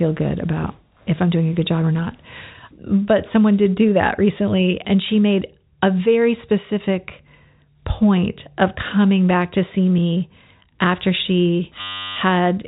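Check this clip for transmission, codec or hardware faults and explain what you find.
One hardware fault is present near the end of the telephone-band speech. A system hang loop runs from 11.81 to 12.16 s: the system froze while the audio hardware kept replaying the same 10.67 ms slice, which fits a 512-sample buffer. It is heard as a steady buzz at about 94 Hz.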